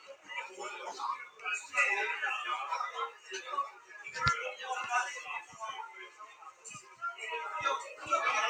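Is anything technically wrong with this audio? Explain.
Yes. A noise suppressor designed for speech has been applied to this recording of sounds. It treats steady tones and decaying tails as noise and turns them down, so the gain swings by roughly 15 dB. Onsets pass while sustained parts sink, producing audible pumping and thinning.

Sound is cut by the noise suppressor at 0.0–0.31 s (about 13 dB), 1.25–1.45 s (about 11 dB), 3.1–3.31 s (about 10 dB), 3.69–4.02 s (about 12 dB), 5.42–5.61 s (about 9 dB), and 5.9–7.02 s (about 13 dB). The longest cut lasts roughly a second. In each case the suppressor clamps down on held or fading material, so it sinks in level or its decay is truncated.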